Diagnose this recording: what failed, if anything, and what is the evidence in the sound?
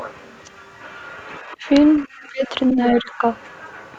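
Speech suppressed in double talk at 1.4–1.69, 2.06–2.52, 2.72–2.81 and 3.02–3.24 s: level dips of up to about 25 dB, likely call-processing echo cancellation muting during overlapping talk.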